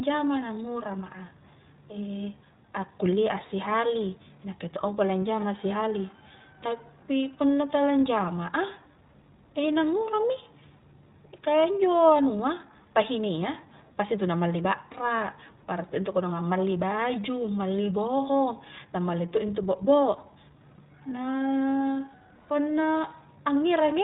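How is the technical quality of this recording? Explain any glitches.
The technical quality is limited by plainly audible codec damage, plus one brief dropout late in the clip.

iLBC codec, throughout: the speech has passed through this narrowband VoIP codec, which fits its 15.2 kbps mode with 20 ms frames. Everything above 4 kHz is gone, leaving a muffled, band-limited sound. Each frame's excitation is coded independently, which gives the speech a slightly rough, synthetic texture.

Lost iLBC frames, 20.76 to 20.80 s: roughly 20 ms of audio is missing, which points to a single lost frame. The decoder bridged the gap by repeating the last pitch cycle blended with noise, heard as a tiny held, faintly buzzy sound. Because iLBC frames stand alone, the speech recovers immediately afterwards.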